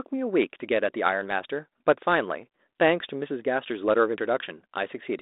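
Listening to this speech recording, nothing stood out as a technical problem.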